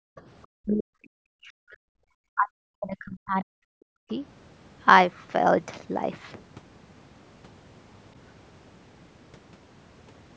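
Speech suppressed in double talk appears at 0 to 0.17 s, 0.59 to 1.91 s and 2.35 to 4.11 s. The speech dips sharply, falling about 40 dB at its deepest, with well over a second lost in each of the longer spans. The likely cause is an echo canceller that, with both ends talking at once, could not tell this talker from its own loudspeaker echo and attenuated everything together. Above that, the call band stops at 8 kHz.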